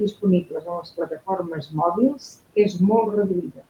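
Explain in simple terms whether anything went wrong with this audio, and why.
Between 0.44 and 1.28 seconds, parts of the speech sound swallowed: quiet sounds and word endings turn faint and seem to sink into the background, adding up to about a third of a second in all. This is speech cut by the noise suppressor. That feature listens for steady room noise and turns it down, but here it mistook some soft speech for noise and lowered it too. The room noise itself stays well beneath the talking.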